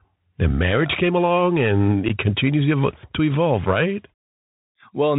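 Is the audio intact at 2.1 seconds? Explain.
No. From 2.09 to 2.11 s, just after "marriage came along and", there's unconcealed Bluetooth headset packet loss. A few voice packets, about 11 ms of audio, never arrived and got filled with silence or an idle pattern, leaving an abrupt little hole. The speech also comes back briefly quieter. The Bluetooth CVSD headset codec is there too, as it is across the whole clip. It caps the band below 4 kHz and lays scratchy, granular hiss over the speech, which fits a 64 kbps CVSD link.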